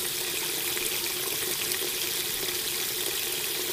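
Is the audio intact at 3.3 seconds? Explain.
No. At 3.3 s, as throughout, the audio is read two samples at a time, so it plays at double speed, an octave high.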